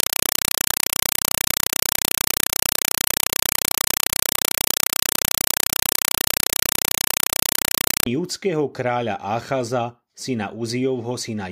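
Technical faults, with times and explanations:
0.0 to 8.06 s, compressed stream played as audio: a Dolby Digital (AC-3) bitstream reaches the output as if it were ordinary samples, with no decoding. Each coded frame becomes a 4 ms burst of noise followed by zero padding, repeating 31.25 times a second. The result is very loud, chattering static in place of the speech, and its density fits a 192 kbps stream.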